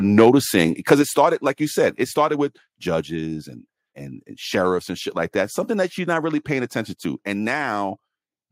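A speech clip in which the loudest syllables near the start break up with a harsh, crackling edge, between 0.18 and 0.29 s and again at 0.91 to 0.93 s. The likely cause is microphone overload: the peaks were driven about 4 dB and about 2 dB past the converter's ceiling, so their tops are flattened, with a few percent of samples clipped in each burst. That is what separates it from a level change: the grit sits only on the peaks, and the overall loudness stays where it was. Shortly after the second burst, at 1.02 s, just before "started like you said", the whole signal, voice and background alike, drops cleanly by about 5 dB. A second, smaller drop of about 2 dB follows at 2.04 s, between "started like you said" and "started with judges and". These are the microphone volume stepped down, presumably by the call software reacting to the clipping. Unlike overload, each step adds no distortion; it is a sudden, lasting shift in level that the room tone follows too.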